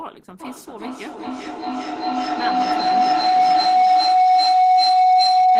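A speech clip with feedback howl from 0.4 s to the end. A microphone-to-loudspeaker loop gains level on each pass. Repeats grow, narrowing to a tone near 700 Hz. It repeats roughly every 400 ms. It peaks about 15 dB above the speech.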